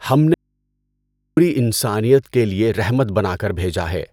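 From 0.34 to 1.37 s the speech drops out to faint hum, an audio dropout to a faint residue, likely a broken feed into a live input, returning abruptly at "انسانیت کے لیے رحمت".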